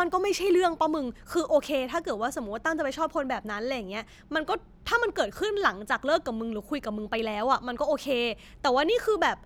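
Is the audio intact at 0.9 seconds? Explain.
Yes, the audio is intact at 0.9 seconds, with no fault present at that moment.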